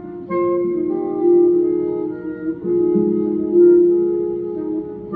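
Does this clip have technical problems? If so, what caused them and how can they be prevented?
No, nothing technical jumps out here, so there's no cause to chase down and nothing you'd need to do differently next time.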